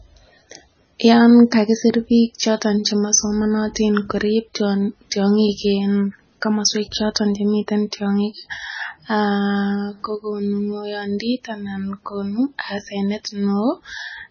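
Speech audio carrying heavy MP3 compression throughout, likely from an encoder starved of bits, which fits a bitrate somewhere near 18 kbps. The treble is cut flat, with nothing above 6.5 kHz, and weak frequency lines blink on and off, leaving a watery, swirling texture.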